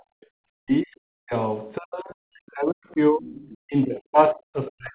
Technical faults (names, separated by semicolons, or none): speech suppressed in double talk; other side's voice leaking through